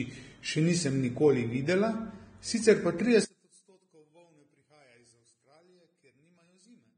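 Speech runs throughout with hissy, grainy treble and nothing above 9.7 kHz, likely Vorbis compression at a low bitrate around 22 kbps. It sounds like noise-filled roughness rather than warbling. From 3.25 s to the end, the speech drops by about 34 dB to a faint residue, likely from one channel inverted cancelling in mono, not from a dropout to silence.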